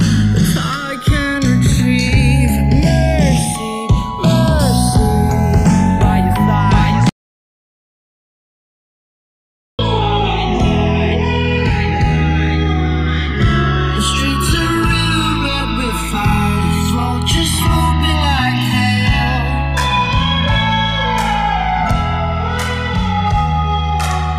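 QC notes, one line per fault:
Throughout: channels drifting apart. The left and right channels were captured on devices with separate clocks that disagree by something like 100 ppm, so the delay between them creeps steadily and ends up at roughly one and a half milliseconds. When the two are summed to mono, the comb-filter notches from that offset slide slowly through the spectrum, which is heard as a gradual, sweeping flange that keeps moving across the whole clip.
7.09–9.79 s: audio dropout to silence. The sound stops abruptly and falls to silence for 2.69 s, with no room tone or noise floor underneath, before cutting straight back in mid-flow. A silent gap like this points to the input being lost while the recorder kept writing, likely from a disconnected device, a failed link or a mute. Whatever sounded during that stretch is gone and cannot be recovered.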